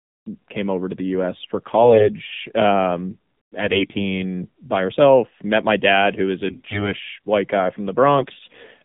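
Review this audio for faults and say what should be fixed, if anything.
AMR narrowband mobile codec, throughout: the audio is confined to about 150 Hz to 3.7 kHz, and the speech has a buzzy, synthetic edge. Each 20 ms frame is rebuilt from a vocal-tract model driven by a handful of pulses, and the coarseness fits a low-rate mode such as 7.4 kbps. To prevent it, capture or route the call over a wideband path, or at least a higher AMR mode.

AMR bit errors at 1.82–2.09 s, at 3.60–4.19 s just before "by herself met my", at 6.48–6.94 s between "my dad who is" and "white guy", and at 8.18–8.61 s after "white guy": the pitch and level hold, but the speech turns hoarse, scratchy and gargly. Flipped low-priority bits misplace the excitation pulses and skew the gain and spectral values, and the last two bursts are the worst hit. To prevent it, strengthen the radio link or use stronger channel coding so the unprotected bits arrive intact.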